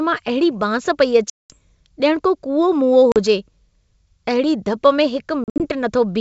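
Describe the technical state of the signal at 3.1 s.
Packet loss on an ADPCM call, 3.12 to 3.17 s: about two packets (40 ms) become a hard-edged silent gap, and the decoder's predictor and step size lose sync, distorting the restart.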